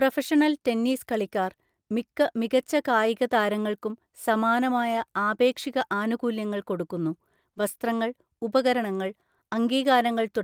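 No technical faults can be heard anywhere in the recording. Nothing in the audio needs to be flagged.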